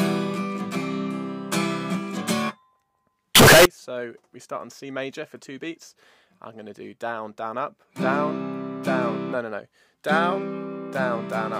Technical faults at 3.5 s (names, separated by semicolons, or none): float read as integer